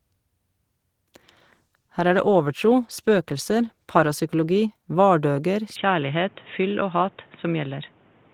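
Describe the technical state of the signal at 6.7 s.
At 6.7 s the speech sounds dull and boxy, with nothing above 3.8 kHz, and a faint new background noise sits well beneath it. The change arrives abruptly at 5.76 s with no gap, holds at the same loudness, and lasts to the end of the clip. This is likely an input switched to a poorer device: the system swapped to a narrower-band microphone or a headset call profile, bringing its own tone and noise floor.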